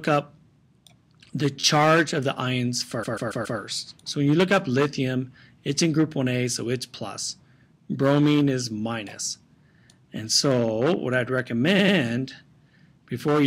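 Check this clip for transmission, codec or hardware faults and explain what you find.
Three bursts of repeated frames are present. At 1.60–1.64 s an 11.6 ms block plays three extra times. At 3.02–3.58 s a 139 ms block repeats four more times. At 11.78–11.96 s a 93 ms block repeats twice. A run of compressed frames was delivered more than once, so the decoder replays the same slice of sound. Each one is heard as a stutter, and the audio runs longer by about 35 ms, 0.56 s and 0.19 s respectively.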